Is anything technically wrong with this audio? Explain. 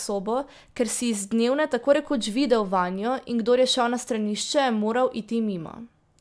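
No, nothing technically wrong can be heard here.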